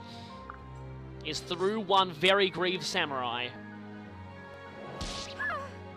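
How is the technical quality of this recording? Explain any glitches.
There are short skips in the sound at 1.6, 2.58, 3.56, 4.54 and 5.52 s, about once a second, each dropping around 20 ms. That's likely audio missing between chunks: a processor handling one-second blocks loses a sliver at each handoff and butts the sides together.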